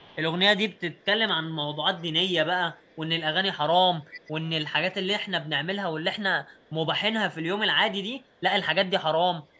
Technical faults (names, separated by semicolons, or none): echo leak